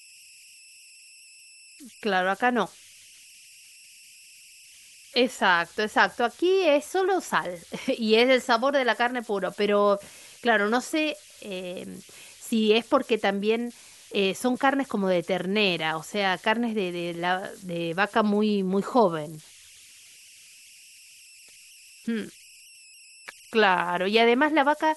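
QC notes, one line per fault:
throughout, converter idle tones: whistle near 3 kHz in pauses, about 27 dB down, from an undithered delta-sigma converter stuck in repeating bit patterns.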